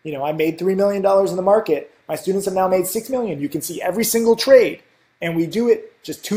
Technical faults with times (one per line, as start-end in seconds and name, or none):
0.00-6.37 resampler restarted on every block